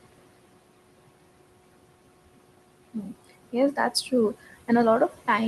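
Noise suppressor artifacts run through the whole clip: the suppressor pulls the bands it judges to be steady noise down by about 21 dB, frame by frame, so the room noise, sitting about 12 dB below the speech, dips in the gaps and returns under talking. Speech cut by the noise suppressor follows from 2.83 to 3.13 s, where the suppressor mistakes some quiet speech for background and drops it by up to about 20 dB, so roughly a tenth of a second of sound comes across swallowed and faint.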